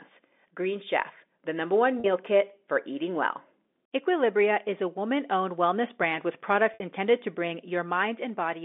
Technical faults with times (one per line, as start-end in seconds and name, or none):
2.00-2.04 packet loss with pitch repetition
6.74-6.80 packet loss with pitch repetition